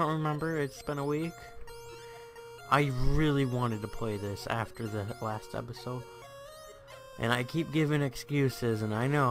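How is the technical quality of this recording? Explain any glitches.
No glitches can be heard anywhere in the recording; the signal stays steady and intact throughout, with no interruptions or distortions to explain.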